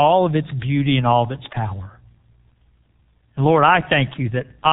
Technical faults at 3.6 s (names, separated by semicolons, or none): G.723.1 codec